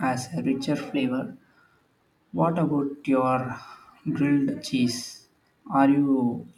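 From 0.95 to 1.53 s the speech runs 6% fast and a semitone sharp, then snaps back: likely a drift correction step, abrupt rather than gradual like wow.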